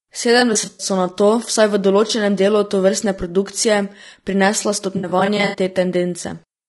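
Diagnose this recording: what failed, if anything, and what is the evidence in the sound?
At the codec stage, the speech sounds rough and grainy throughout. Noise fills the gaps between harmonics, and the top band sounds synthetic. This is likely low-delay AAC compression (AAC-ELD) at a low bitrate near 32 kbps. Its short frames resolve pitch harmonics poorly.

At the network stage, there is AAC frame loss with concealment. Smeared, noisy patches appear from 0.39 to 0.87 s, before "nato vsaj v". A brief one comes at 2.07 s, before "delu tovrstne produkcije prinesla", and more come at 4.97 to 5.59 s. Each time, the decoder patches the gaps from the last good spectrum.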